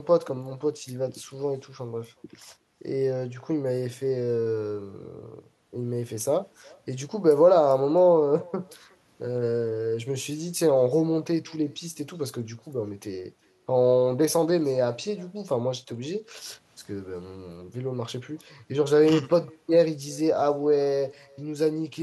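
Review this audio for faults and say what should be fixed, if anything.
Echo with no canceller throughout: the far-end loudspeaker re-enters its microphone, returning each phrase roughly 400 ms later, about 28 dB down, as faint trailing spectrogram ghosts. Enable acoustic echo cancellation at the far end, or have that side use a headset.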